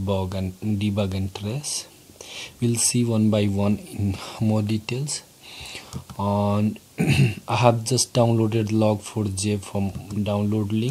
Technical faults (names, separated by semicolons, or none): none